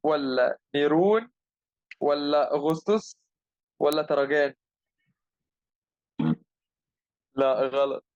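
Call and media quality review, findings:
Bit error spike, speech. Single flipped bit in memory or on a digital link; the sample value jumps by a power of two and snaps straight back. Heard as isolated sharp ticks, broadband and unrelated to the voice. 2.7 s: brief tick peaking at about -14 dBFS, consistent with one corrupted sample. 3.93 s: louder tick, about -8 dBFS, slightly fuller, pointing to two or three consecutive corrupted samples. Check buffer memory and interface integrity.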